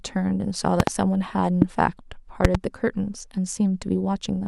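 Three loud pop events cut through this speech, each jumping roughly 20 dB above the surrounding level. There's a quick double pop from 0.80 to 0.90 s, a single one from 1.62 to 1.64 s, and another doubled pair from 2.45 to 2.57 s. They're most likely voltage spikes from a plug, switch, static or driver glitch getting into the chain, and you can hear the talker carrying on under each thump.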